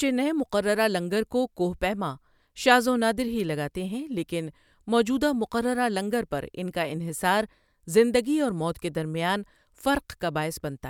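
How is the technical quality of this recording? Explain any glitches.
Listening through the recording, nothing stood out as a technical problem, and there are no glitches to explain.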